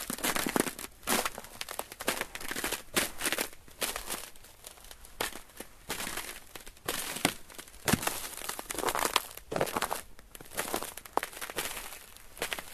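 Damaged data in a compressed stream at 9.10 s. For a brief instant the decoder hits corrupted bytes, misreads the frame, loses sync and hunts for the next valid header. The result is a short chirp or blip.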